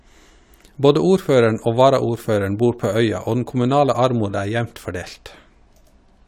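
Speech recording with no technical faults heard anywhere.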